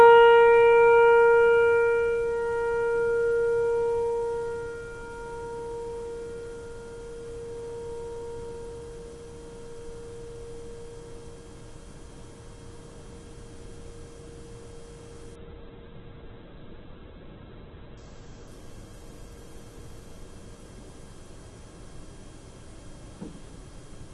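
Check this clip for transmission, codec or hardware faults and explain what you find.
One transmission fault: a call bitrate drop from 15.37 to 22.05 s. The encoder was starved of bits, so audio bandwidth narrowed from 16 kHz to 4 kHz, consistent with roughly 64 kbps falling to about 7 kbps. The sound turns coarse and muffled, worst for about 2.1 s, before recovering.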